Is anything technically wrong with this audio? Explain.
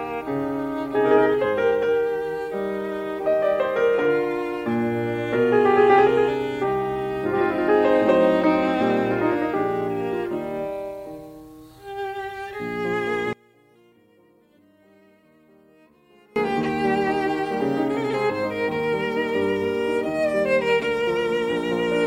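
Yes. From 13.33 s to 16.36 s the music drops by about 30 dB into a faint residue, which points to one channel inverted, likely one stereo side flipped in polarity so that material common to both channels cancels when summed. Centred parts largely disappear, leaving only the channel difference. A waveform shows a sudden collapse in amplitude across that span, and a spectrogram shows overall energy sharply reduced until it recovers at 16.36 s.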